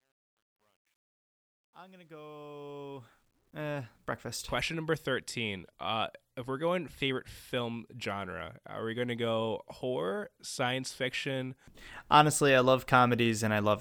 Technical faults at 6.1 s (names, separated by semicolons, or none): none